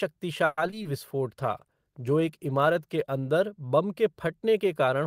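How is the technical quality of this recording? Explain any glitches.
The recording has two separate impairments, both typical of a network voice call.

From 0.45 to 0.87 s, repeated packet loss gives a choppy, robotic stretch. Four short holes, the longest 120 ms, are patched by stretching the preceding sound, so about 41% of that span is synthetic. The audible breaks set it apart from a bitrate problem.

From 1.27 to 3.81 s, a call bitrate drop makes the speech rough and muffled. It fits the encoder falling from about 32 to 16 kbps, staying at its lowest for 1.71 s, coding coarsely and trimming high frequencies. The sound stays continuous, with no gaps, unlike packet loss.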